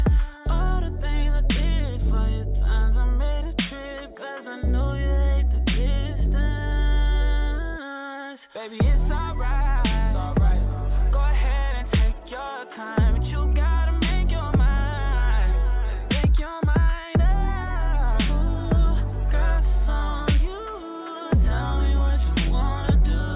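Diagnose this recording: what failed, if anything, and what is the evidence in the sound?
Nothing here seems to have failed: I listened for trouble at every stage from the wiring to playback and the audio gives no evidence of any.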